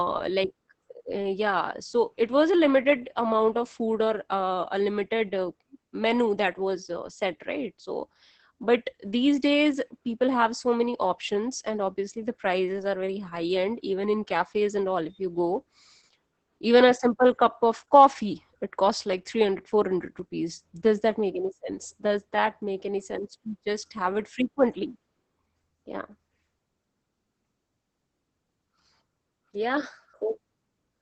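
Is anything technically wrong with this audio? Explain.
Yes. Heavy Opus voice compression runs through the whole speech clip. The sound points to Opus at about 10 kbps in its SILK linear-prediction mode: the band is held to wideband, with nothing above 8.8 kHz, and the excitation is coded coarsely at this low rate. The speech sounds muffled and hoarse, with a slightly robotic, buzzy texture. Consonant detail and breathiness above the cut-off are missing.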